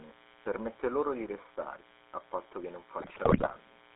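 From the first moment there's a mains buzz under the speech, sitting roughly 25 dB below it. It's that raspy, constant edge you get when a dimmer or rectifier throws sharp spikes into the line twice every cycle. Here the base is 60 Hz, and because the spikes are so abrupt, the harmonics stack well up into the kilohertz range, so it reads as a gritty buzz rather than a low hum.

The whole clip has also been through the GSM full-rate codec, and the damage is plainly audible. The voice has that gravelly, buzzy texture from a coder that models the vocal tract and excites it with a coarse, regularly spaced pulse train, keeping only a third of the excitation detail. The band runs from about 250 Hz to 3.7 kHz, so there's no low body and nothing airy up top. The sound fits the old 13 kbps full-rate mode.

From 3.0 to about 3.57 s, GSM bit errors take over. Corrupted bits are reaching the decoder, so the filter, pitch and gain values it rebuilds from are wrong for frame after frame. 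Across that half-second stretch the speech breaks into squawks, pops and a gargling churn, with the spectrum bending and the level jumping as each bad frame lands. The error rate works out to roughly 3 percent of bits.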